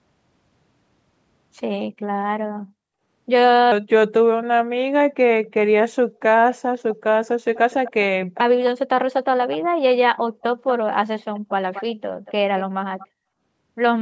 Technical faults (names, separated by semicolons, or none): section at the wrong speed; echo leak